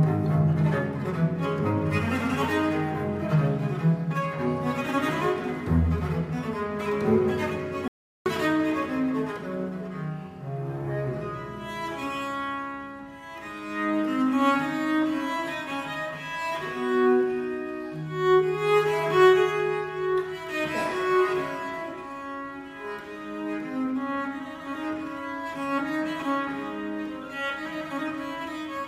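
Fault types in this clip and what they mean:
Audio dropout to silence: at 7.88 s the sound cuts off abruptly and the signal sits in silence until 8.26 s, about 0.38 s lost, before returning mid-flow. The gap holds no room tone at all, which points to the input likely being lost, through a disconnected device, a failed link or a stray mute, while recording continued. On the waveform this is a flat line; a spectrogram shows a clean vertical dark band.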